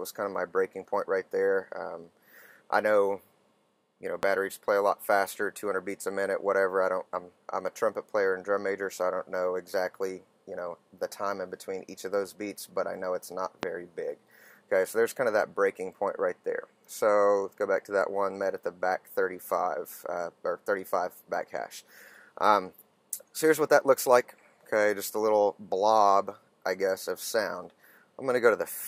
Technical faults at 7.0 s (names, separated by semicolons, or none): none